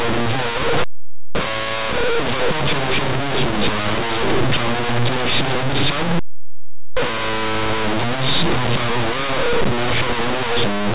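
From the start of the clip to its end, the speech carries very loud, harsh distortion, the signature of linear audio read as companded. The samples were written as plain linear 8-bit values but expanded as if they were mu-law codes. Small values just on one side of zero become the largest outputs, while those on the other side stay small, so even quiet passages come out very loud.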